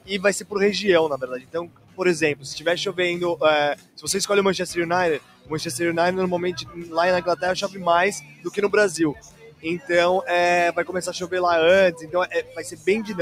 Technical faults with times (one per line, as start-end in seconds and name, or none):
0.00-13.21 noise suppressor applied to music or sounds
0.00-0.54 sound cut by the noise suppressor
1.22-2.46 sound cut by the noise suppressor
3.75-4.04 sound cut by the noise suppressor
5.19-5.52 sound cut by the noise suppressor
6.57-6.94 sound cut by the noise suppressor
7.67-8.58 sound cut by the noise suppressor
9.14-9.89 sound cut by the noise suppressor
11.92-13.21 sound cut by the noise suppressor